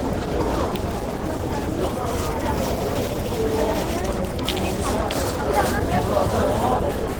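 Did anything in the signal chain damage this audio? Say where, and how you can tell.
Yes, at the codec stage: the whole clip sounds grainy, rough and hoarse, which fits likely Opus compression in its hybrid mode at roughly 16 kbps.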